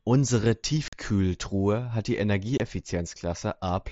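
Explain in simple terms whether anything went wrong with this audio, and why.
Unconcealed Bluetooth headset packet loss: at 0.88 s and 2.58 s the headset link dropped speech packets, leaving abrupt gaps of about 45 ms and 22 ms, over light mSBC wideband coding.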